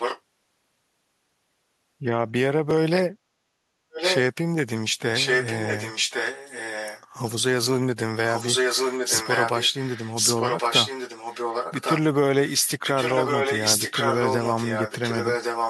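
Right from the start, 0 to 0.21 s, there's an echo leak: a copy of the speech trailing about 1.11 s behind, roughly 5 dB under the direct voice. It's likely a loudspeaker on the far end whose echo canceller let its mic pickup slip back through.

At 2.71 s there's a repeated buffer. A 5 ms slice plays twice with a hard join, because fresh audio didn't arrive in time. It's so short it comes across as a click or brief buzz rather than a stutter.

The echo then keeps coming back, always about 1.11 s late. It runs 3.91–4.21 s, 5.14–7.04 s and 8.29–12.0 s at roughly the same level as the speech itself. There's a faint scrap from 12.6 to 12.69 s, about 30 dB down, and then it sits at full level again from 12.86 s to the end.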